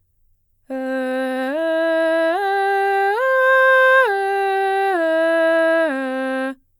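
There are no technical faults to describe at any point in the music.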